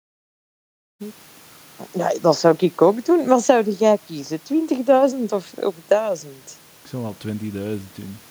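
No technical faults can be heard in this speech recording.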